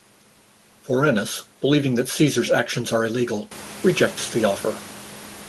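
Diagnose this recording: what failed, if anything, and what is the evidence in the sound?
Nothing in this recording points to a failure at any stage. The room's background noise steps up by about 17 dB at roughly three and a half seconds yet stays about 20 dB under the speech, and the top of the spectrum stops near 12 kHz, which fits a super-wideband Opus call path working as set up.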